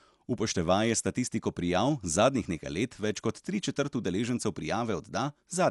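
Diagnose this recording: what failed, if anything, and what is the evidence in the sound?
Across the whole speech recording the sound is dull and band-limited, with nothing above about 11.4 kHz, and a rough, fluttering noise hangs around the voiced tones. The failure is at the codec stage, likely Dolby Digital compression starved of bits, which fits a rate near 64 kbps. The encoder trimmed the top of the band and left many frequency lines without mantissa bits, so the decoder filled them with dither noise.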